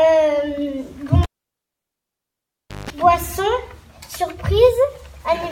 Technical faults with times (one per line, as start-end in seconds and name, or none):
1.23-2.90 cable pulled and plugged in